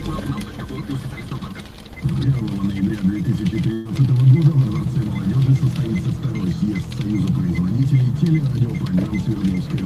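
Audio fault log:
3.73 to 3.87 s, burst of packet loss: a short run of consecutive packets never arrived in time, so the receiver filled the hole for about 116 ms by stretching the last good sound and lowering it as the gap went on. The result is a brief held, fading smear where fresh audio should be, after which playback picks up further along, with roughly 120 ms of the original sound skipped entirely and no silence in between.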